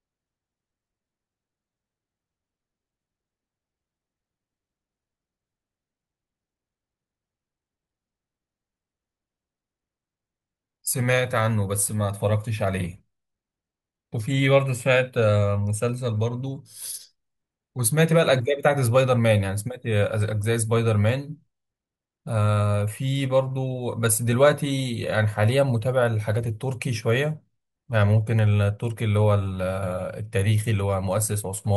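Nothing here stands out as a technical fault, so the speech can just be left to carry itself without any glitches to flag.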